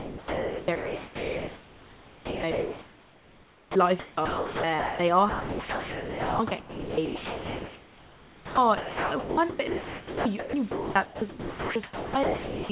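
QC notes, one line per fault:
0.0–4.99 s and 5.29–12.69 s, sound chopped by the voice detector: choppy, with about 4.4 s then 6.0 s swapped for flat synthetic hiss, likely from voice-activity gating filling gaps with comfort noise.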